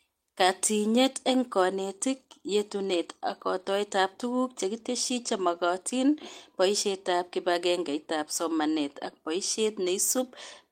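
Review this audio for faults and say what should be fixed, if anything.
No faults; nothing needs fixing.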